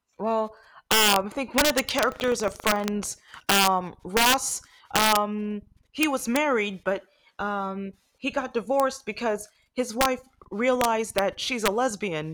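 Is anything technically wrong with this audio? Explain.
Yes. There are two faults in this speech clip.

Integer overflow runs throughout. The signal is driven about 5 dB past the integer limit. A small fraction of peaks wrap to the opposite sign instead of being limited. Each one swings across the full range, so loud syllables crack violently, far harsher than clipping.

Buffer tearing occurs from 2.08 to 2.88 s. The writer and the hardware reader of the ring buffer cross inside each period. A small slice of every buffer holds audio from about 150 ms earlier, with hard joins. This produces a robotic 25 Hz buzz.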